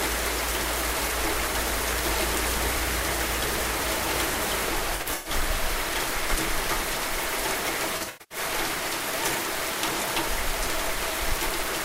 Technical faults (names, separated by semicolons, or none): AAC frame loss with concealment